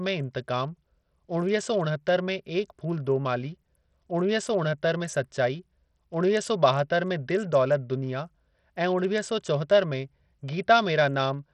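A speech recording carries heavy Bluetooth SBC compression from start to finish, the damage of a bitrate as low as 64 kbps. The likely cause is a starved bit pool, where the weak upper sub-bands get few or no bits, so the treble flickers in and out while gritty quantisation noise and aliasing sit on the voice. On a spectrogram, the upper bands appear as broken, patchy blocks beneath a ceiling at 21 kHz, with grainy fill between harmonics.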